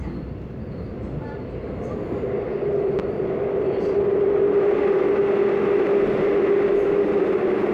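At 2.99 to 3.02 s a single loud pop cuts in. It peaks roughly 10 dB above the surrounding sound, which carries on underneath. The cause is likely a sudden voltage pulse, from a switch, plug, static or driver glitch, entering the signal path.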